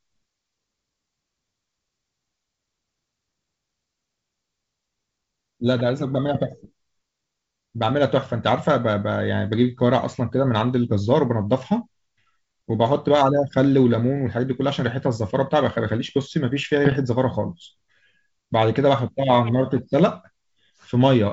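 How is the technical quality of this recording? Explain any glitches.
Two short glitches mar the speech; the wideband telephone coding underneath sounds clean, clear up to about 7 kHz, consistent with G.722 at its top 64 kbit/s rate.

Bit errors on an ADPCM link, at 6.30–6.40 s and 16.85–16.97 s: a small fraction of flipped bits knocks the decoder's step size and predictor off track, producing pops and rough bursts with brief level jumps.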